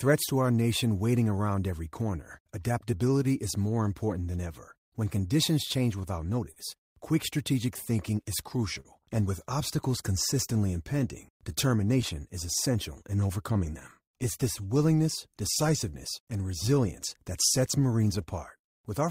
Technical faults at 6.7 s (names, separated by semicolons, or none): clock drift between sender and receiver; repeated timing corrections; scattered short gaps